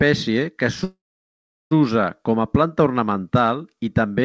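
A call audio freeze runs from 0.84 to 1.74 s in this speech clip, most likely because packets were delayed in transit and the jitter buffer ran dry. For about 0.87 s the receiver filled the hole itself, briefly extending the last sound before it faded into roughly 0.74 s of silence. The speech then resumes with "com a" exactly where it had stopped, so nothing is lost but the rest of the clip arrives late. Above 8 kHz the clip is empty, consistent with a 64 kbps G.722 call codec.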